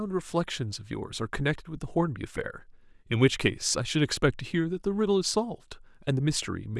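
No technical faults are audible.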